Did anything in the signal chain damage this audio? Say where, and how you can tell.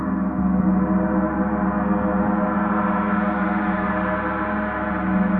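No, nothing damaged it.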